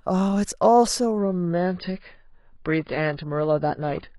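At 1.18 s the adaptive stream switches to a lower bitrate and stays there to the end. The sound points to a drop from a fairly generous AAC encoding to a very lean one, around 16 kbit/s. From that moment the speech loses everything above about 5.1 kHz, so sibilance and air vanish abruptly, and codec artefacts become more audible. The change is instant, with no gap or pause at the switch.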